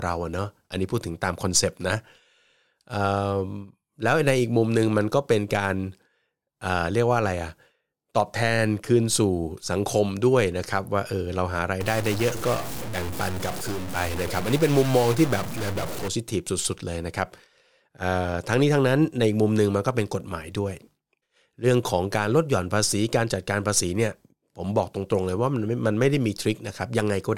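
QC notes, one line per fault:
11.81 to 16.08 s, stuck bit: the speech turns harsh and buzzy for about four seconds, and grainy noise fills the gaps between phrases. One data bit seems stuck, likely from a bad line or converter, knocking about half the samples off by a step of roughly -30 dBFS.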